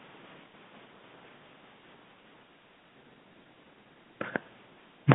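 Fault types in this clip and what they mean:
No fault types are present in the clip.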